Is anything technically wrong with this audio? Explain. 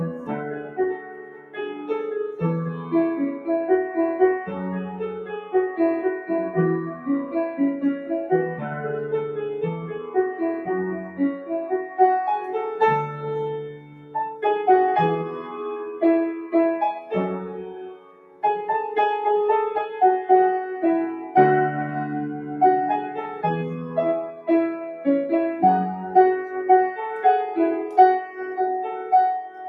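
Yes. A noise suppressor applied to music or sounds runs throughout: built for speech, it treats steady tones and decays as noise, so level swings by roughly 10 dB and tails pump and thin.

Sound cut by the noise suppressor occurs at 0.15–1.9 s, 4.9–5.54 s, 9.94–10.16 s, 10.98–11.2 s, 13.71–14.15 s, 17.59–18.43 s, 24.31–24.48 s and 29.49–29.65 s. The suppressor mistakes this material for noise, pulling it down by up to about 13 dB and cutting sustains short.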